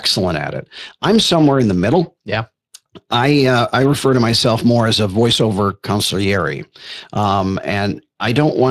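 From start to finish the speech carries Speex codec damage that is plainly audible. This CELP coder rebuilds each sound from a predicted filter plus a coded excitation, and the excitation here is short of bits, which fits a mid-range Speex mode around 22 kbps. Voiced sounds come out grainy and hoarse rather than swirly or watery, which sets it apart from transform codecs such as MP3. Nothing is present above 15.3 kHz.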